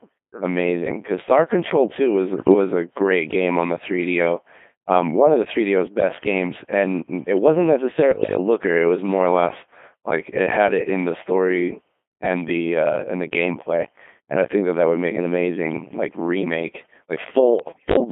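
Speech heard throughout through the Codec 2 vocoder, buzzy and robotic within a 200 Hz to 3.5 kHz band, fitting a 2.4 kbit/s mode; unlike ordinary lossy codecs, the waveform itself is resynthesised. Bit errors on digital voice radio at 2.37–2.54, 8.12–8.38 and 17.60–17.96 s cause sudden pitch, level and timbre jumps and warbling bleeps, not dropout silence, worsening with each burst.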